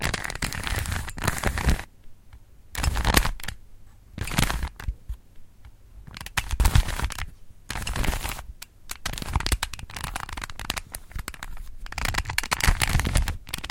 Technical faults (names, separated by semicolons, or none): chunks out of order